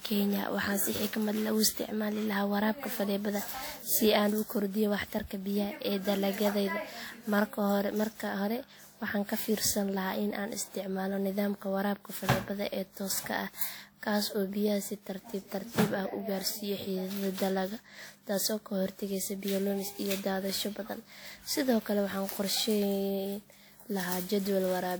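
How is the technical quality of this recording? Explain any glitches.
The recording is degraded throughout by generation loss. The speech has most likely been decoded and re-encoded with a lossy codec about seven times, and the character fits WMA 1 at around 96 kbit/s. Each pass quantises again on a shifted frame grid, so noise and spectral gaps accumulate. The result sounds swirly, smeared and hollow, with blurred consonant attacks, and nothing remains above 20.1 kHz.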